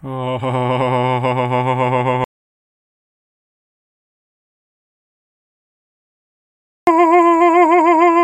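The input feed to the recorder was likely lost, so zeros were written in its place: an audio dropout to silence from 2.24 to 6.87 s. The music stops abruptly, leaving about 4.6 s of dead digital silence with no room tone, then resumes mid-flow.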